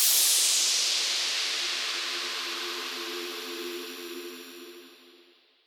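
No technical faults can be heard anywhere here.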